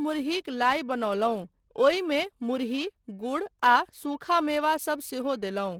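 From start to finish the speech has a hoarse, muffled quality with a grainy, rough texture on voiced sounds. Parts of the spectrum are filled in with noise rather than detail, yet the top end still extends to about 20.2 kHz. The likely cause is Opus compression at a low rate, one that fits roughly 16 kbps, where the encoder falls back to its hybrid speech mode. It keeps band energy but substitutes noise and folded content for the fine structure.

Across the same span the speech carries a metallic, buzzy edge, strongest on sibilants and bright consonants, and it drops away in the pauses. This is periodic clock jitter: interference modulates the converter's sampling clock at a steady rate of around 2 kHz. That sprays sidebands about 2 kHz above and below every component of the signal. The higher components suffer most, which is why the harshness clings to the brighter parts of the speech.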